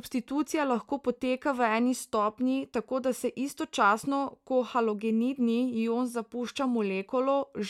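Speech, with nothing technically wrong with it.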